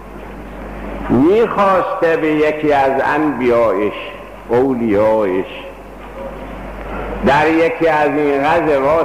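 No technical faults occur at any point in this audio.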